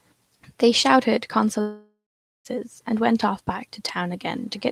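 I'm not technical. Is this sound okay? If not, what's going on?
No. From 1.61 to 2.47 s the speech cuts out for about 0.85 s. At first the last bit of sound is stretched into a buzzy, fading hiss, and then roughly the last half second is near silence. When the speech resumes, the part that should have filled that gap is simply missing. This is most likely a long network dropout: the audio stopped arriving for a while, the playback tried to paper over it, then gave up until the connection returned.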